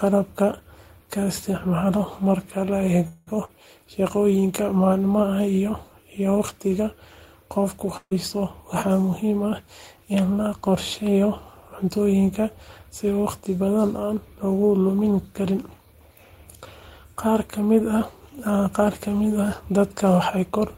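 From 3.07 to 3.29 s a call audio freeze stretches the last sound into a fading buzz or hiss for about 190 ms, likely from held-up packets. The spectrogram shows smeared, repeated harmonics, and the audio resumes without loss. At 3.45 to 3.50 s, short concealed packet loss replaces about 40 ms with a brief smeared wobble, visible as a blurred patch in the harmonics. From 7.97 to 8.13 s a burst of packet loss drops 140 ms: the last sound is held and decays into silence for about 50 ms, a tapering envelope ending in a flat gap in the waveform. Jitter buffer speed-up runs 15.79 to 16.33 s at 113% speed, trimming roughly 70 ms, and 19.43 s to the end at 104%, trimming about 50 ms. The first sounds hurried; both keep unchanged pitch, with pitch periods spliced out in the waveform.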